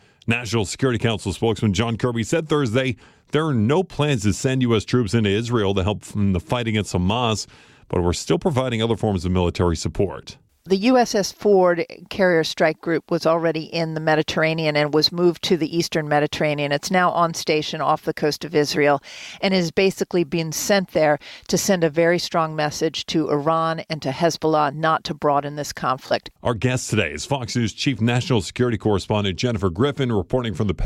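At 26.08 to 26.12 s a Bluetooth stutter occurs: a late packet left the receiver replaying its last slice, about 23 ms, giving a brief stuttered repeat before the speech resumes.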